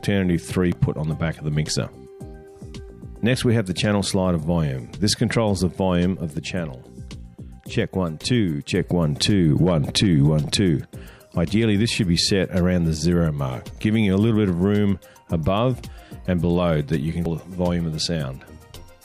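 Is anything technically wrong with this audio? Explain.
Yes, there is damaged data in a compressed stream, at 0.72 s and again at 17.25 s. Corrupted bytes in the encoded stream made the decoder misread those frames and lose sync until it found the next valid header, leaving a brief chirp or blip in the sound.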